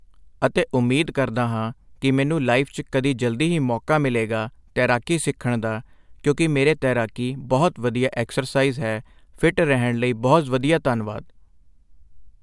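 No technical faults can be heard anywhere in this speech recording. Nothing at any point in the audio stands out as a problem.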